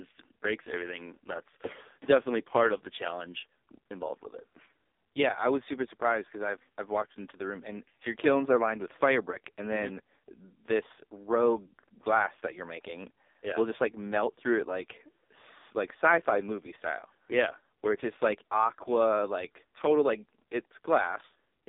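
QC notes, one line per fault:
throughout: AMR narrowband mobile codec. The speech sounds thin, heavily buzzy and synthetic, confined to roughly 250 Hz to 3.7 kHz with nothing above. That coarse buzz fits a very low AMR-NB mode, around 5 kbps, where sparse pulses drive a simple vocal-tract model.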